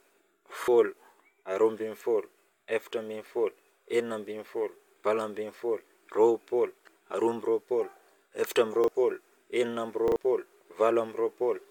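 At 0.64, 5.0 and 8.84 s a repeated buffer makes the speech stutter: new audio arrived late, so the last 40 ms block played again. After "enina amby", at 10.08–10.16 s, it plays twice more. The waveform shows identical copied blocks with abrupt joins, and the spectrogram shows thin vertical lines.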